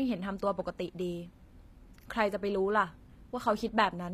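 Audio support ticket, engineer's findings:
Likely HE-AAC compression at a low bitrate, around 24 kbps by the sound, throughout. Treble rebuilt by band replication, not coded. Copied upper bands misalign harmonics across the crossover: s sounds gritty, metallic, lispy. Plainly audible. Nothing above 14.9 kHz.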